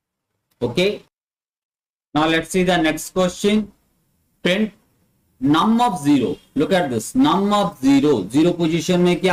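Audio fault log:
throughout: hard clipping. Peaks are driven about 5 dB past full scale, so a few percent of samples are sliced flat. On the waveform the loudest excursions show squared-off tops; the spectrogram shows vertical smears of high harmonics at each peak, heard as crackly harshness.
throughout: clock drift between sender and receiver. The sender's clock runs roughly one and a half percent slow, so the receiver's buffer keeps draining. Small hiccups recur at uneven intervals; on a spectrogram these appear as tiny discontinuities where harmonic lines briefly jump or restart.
0.16 to 9.11 s: repeated timing corrections. To cover the slow sender, the receiver keeps repeating short pieces, running at about 98% speed and adding some 150 ms overall. The waveform shows brief duplicated segments, heard as slight stumbles and a subtly dragging, unsteady tempo.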